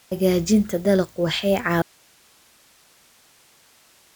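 At 1.82 s the signal feeding the chain was likely lost while everything downstream stayed live, giving an audio dropout to a faint residue that runs to the end of the clip. The speech cuts off abruptly mid-flow, with no fade or natural pause, and what remains is only a steady hiss sitting roughly 35 dB below the earlier level. The speech never returns, so the last stretch is just that low noise floor.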